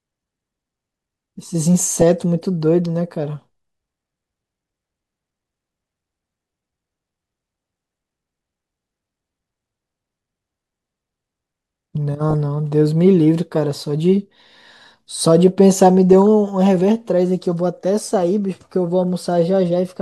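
DAB burbling appears at 1.80 to 2.02 s, again at 12.29 to 12.34 s, and as a brief blip at 16.13 s. Each time, bit errors slip past the error correction into the MP2 data, so samples in single sub-bands decode wrong and add short blips of noise, and wrong scale factors that get through make sub-bands jump in level. The result is burbling laid over the speech, pointing to a bit error rate of a few tenths of a percent.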